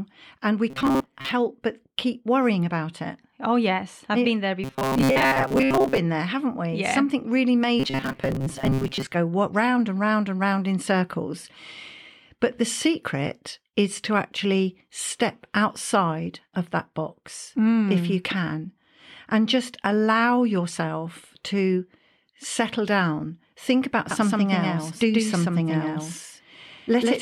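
From 0.70 to 1.31 s, 4.64 to 5.98 s and 7.80 to 9.12 s, the speech takes on a robotic sound from repeated short buffers: a rigid, metallic buzz at 134 Hz that still loosely tracks the speech. The likely cause is audio arriving too seldom, so playback loops a segment of about 7.5 ms (one cycle of 134 Hz). Roughly half the material is repeated in the first and third stretches, and most of it in the second.

From 24.11 s to the end, a doubled audio track appears. A second full-band copy starts abruptly and trails the original by around 150 ms, about 5 dB quieter, with no decay or room colour. This gives a dry, slapback-like echo on every syllable. The likely cause is the same signal being captured again through a slower path, or two out-of-step copies left in an edit.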